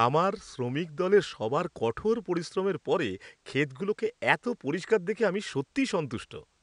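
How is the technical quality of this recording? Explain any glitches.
No glitches can be heard anywhere in this speech recording. The only other sound is faint background noise from the room, sitting about 44 dB below the speech.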